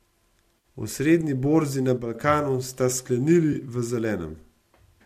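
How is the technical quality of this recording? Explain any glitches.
The speech has three short glitches: two brief dropouts patched over by the decoder, and one abrupt step in level. Beneath them there is a light graininess, likely from low-delay AAC compression, consistent with AAC-ELD at about 64 kbps.

At 0.58 to 0.64 s, the sound turns smeared and noisy for about 50 ms. This is AAC frame loss with concealment. The missing stretch fits roughly five lost 10 ms frames, and the decoder filled the gap by reusing the last good spectrum with altered phase. A second, shorter patch at 3.53 to 3.56 s, about 20 ms long, fits two lost frames and sounds like a phasey blur.

Right after "borzi na", from 1.97 to 2.15 s, the speech and the background noise drop together by about 6 dB, abruptly rather than through a smooth fade, and recover about 0.17 s later. This is a sudden gain jump. The likely cause is a digital gain change applied from one sample to the next without a ramp. 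Because the background moves in step with the speech, the change comes from the signal chain and not from the talker.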